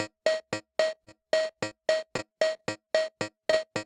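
At 0.95 and 1.05 s, and again at 1.53 and 1.69 s, short concealed packet loss leaves brief smears in the sound. About 20 ms went missing each time and was patched by continuing the previous sound, so the fault is a momentary wobble with a small piece lost, not a change in pace.

Between 1.21 and 1.43 s a jitter buffer slow-down stretches the audio. The receiver repeated small fragments to add about 42 ms of reserve, so the sound plays at roughly 85% speed at unchanged pitch. It is drawn out over a sustained stretch, with nothing chopped away.

From 2.17 to 2.89 s, repeated packet loss produces a choppy texture with pieces missing. Four separate gaps, the longest 22 ms, are each patched in turn and together cover about a tenth of the span. It is the clustering that sets this apart from the isolated losses.

At 3.45 s a short stall from a late packet holds the sound for about 19 ms and then resumes from the same point with nothing lost. 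This differs from the 3.50 s concealed loss immediately after, where 20 ms genuinely drops out.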